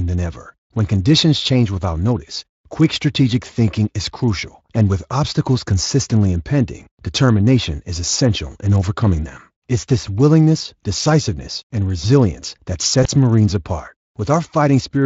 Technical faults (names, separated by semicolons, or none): VoIP packet loss concealed by the speech codec